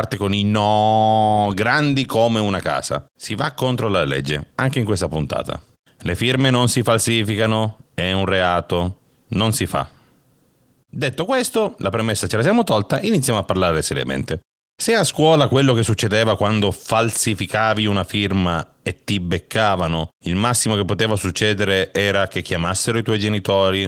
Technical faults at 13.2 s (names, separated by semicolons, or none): none